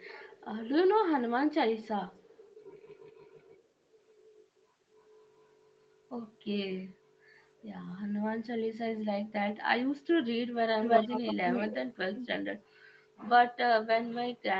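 From 10.81 to 11.35 s and 11.51 to 11.85 s, an echo leak returns the speech about 338 ms late, first louder, then quieter, likely from incomplete echo cancellation.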